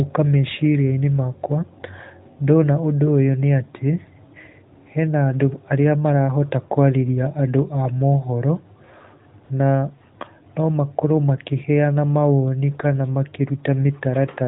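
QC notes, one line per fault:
9.44 to 9.50 s, AMR comfort noise: for about 60 ms the phone decided nobody was talking and stopped sending speech frames, so the far end patched the gap with synthetic noise built from a rough sketch of the background's level and spectrum. You hear the real room tone swapped for a smooth, even hiss that drops in and then out again. It's a brief flip, riding on the clip's narrowband AMR sound, which itself carries only light coding wear at 12.2 kbps.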